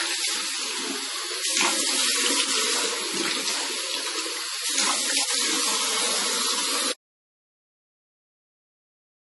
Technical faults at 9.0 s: MP3 compression; audio dropout to silence

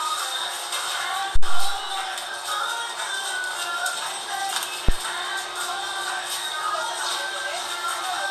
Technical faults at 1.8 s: phantom power thump

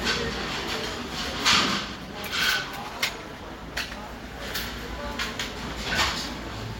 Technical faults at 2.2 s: call bitrate drop

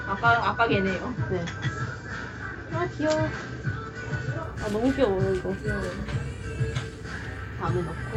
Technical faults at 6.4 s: none

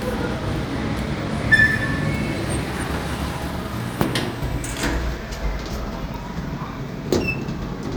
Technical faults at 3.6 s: none

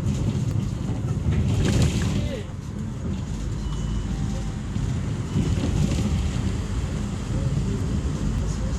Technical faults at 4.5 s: damaged data in a compressed stream

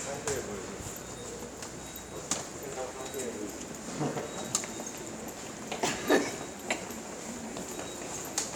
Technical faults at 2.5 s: dropped buffer (overrun)

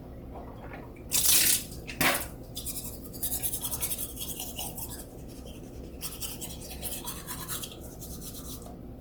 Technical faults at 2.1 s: Opus compression; hard clipping

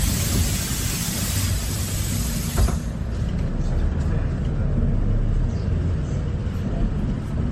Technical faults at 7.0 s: generation loss

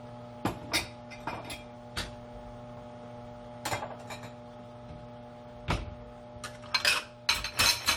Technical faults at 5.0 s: generation loss

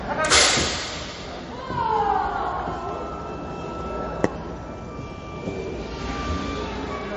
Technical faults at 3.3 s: MP3 compression

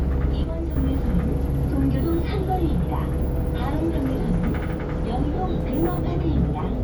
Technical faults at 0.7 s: sudden gain jump

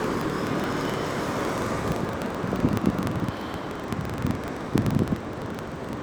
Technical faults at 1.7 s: filter restarted on every block

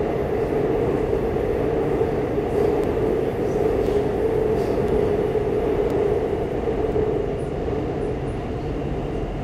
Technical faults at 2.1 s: none

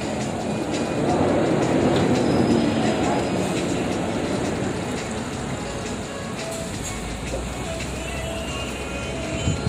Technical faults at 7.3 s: none

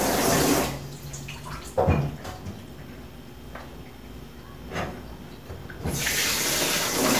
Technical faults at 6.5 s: none

